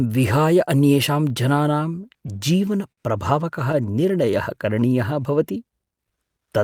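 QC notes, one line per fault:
2.01–2.99 s, repeated stalls (stutter): seven brief holds, longest 54 ms, extend the last sound while the buffer runs dry. Nothing is lost, but playback catches in separate jerks rather than slowing evenly.
3.82–4.81 s, jitter buffer slow-down: repeated pitch periods add about 88 ms, so playback runs at 92% speed with unchanged pitch. It drags smoothly, with no separate catches.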